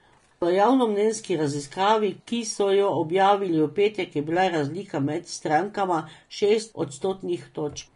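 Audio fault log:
Throughout: Vorbis compression. The speech sounds hissy and grainy, with roughened tones and softened consonant onsets, and nothing comes through above about 10.6 kHz. This is likely low-bitrate Vorbis encoding, around 34 kbps, coarsely quantising treble detail into noise.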